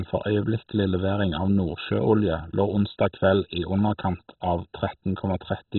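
Throughout, the speech sounds dull and gurgling with a granular roughness: heavy damage from likely MP2 compression at a rate that fits about 16 kbps. Starved sub-bands are switched off, so a spectrogram shows nothing above 4.1 kHz and patchy, flickering blocks below.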